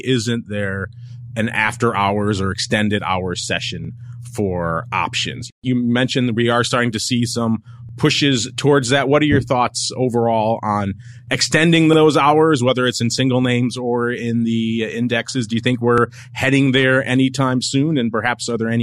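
At 3.85 to 3.89 s you get a little stutter, and it comes back every 4 s: 7.89 to 7.93, 11.93 to 11.98, and 15.98 to 16.02 s. That's overlapping chunks. The audio was handled in 4-second blocks, and each new block starts 44 ms before the previous one finished, so that sliver plays twice at every join. You hear it as a small click or hiccup on a steady beat.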